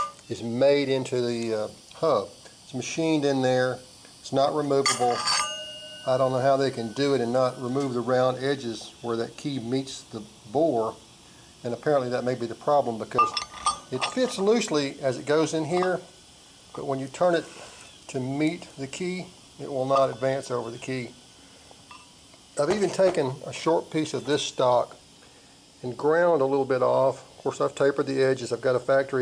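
No technical fault can be heard anywhere in this audio. Nothing in it calls for a time, a value or a cause to be given.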